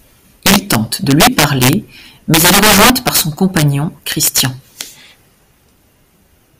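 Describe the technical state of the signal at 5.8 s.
At 5.8 s the signal is intact, with no audible technical fault in the speech at that moment.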